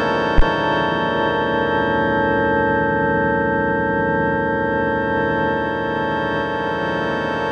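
A deep thump sits under the music from 0.38 to 0.44 s, peaking near -4 dBFS and dying away within about 12 ms. It is a phantom power thump: a supply switched on or off on the live input sent a voltage step through the coupling capacitors.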